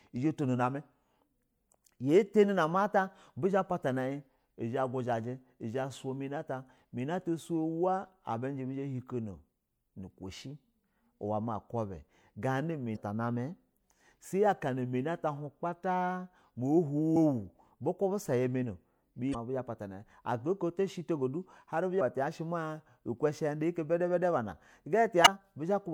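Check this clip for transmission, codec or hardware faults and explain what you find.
The speech has one kind of fault, damaged data in a compressed stream, occurring five times: 12.93–12.97 s (just before "ta namɛ"), 17.13–17.16 s, 19.31–19.35 s, 21.97–22.01 s and 25.24–25.28 s. Corrupted bytes make the decoder misread frames and lose sync, so each spot becomes a brief squawk or blip of about 40 ms.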